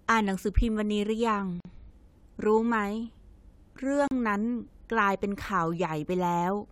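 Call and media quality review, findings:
Gap at a join of encoded pieces: short dropouts in the speech at 1.60–1.65 s (about 47 ms) and 4.08–4.11 s (about 37 ms), with smeared edges. Probably the encoder/concatenation step. Separately encoded segments were joined untrimmed, leaving encoder delay and last-frame padding.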